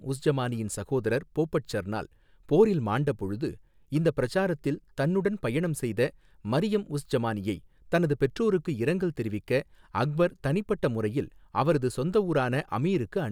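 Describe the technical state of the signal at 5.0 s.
At 5.0 s the speech signal is intact, with no audible technical fault at that moment.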